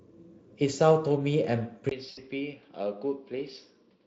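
At 1.89 s the recording likely switched to a poorer input device. After a 20 ms gap, the sound is duller, about 5 dB quieter, with nothing above 5.8 kHz and a faint new background noise. From 2.09 to 2.20 s, VoIP packet loss concealed by the speech codec means about 80 ms of audio was extrapolated, which fits four lost frames. This smears the sound into a fading buzzy tone or coloured noise that stays weak briefly after packets return.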